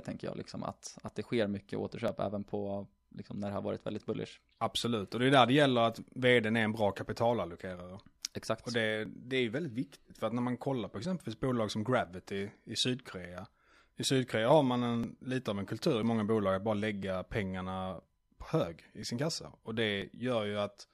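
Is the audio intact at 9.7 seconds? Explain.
No, periodic USB or driver dropouts run from 0.09 to 20.02 s: about every 1.0 s a stalled driver skips a couple of milliseconds of speech, heard as regular ticks.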